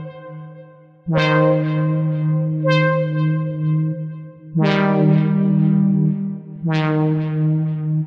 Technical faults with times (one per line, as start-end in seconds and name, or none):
none